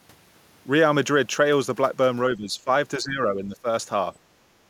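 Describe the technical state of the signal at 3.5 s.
Speech suppressed in double talk, 2.98 to 3.66 s: the speech sinks by about 10 dB, likely an echo canceller ducking overlapping talk, unlike a full dropout.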